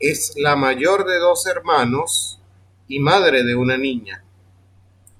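Speech recording; no technical faults can be heard.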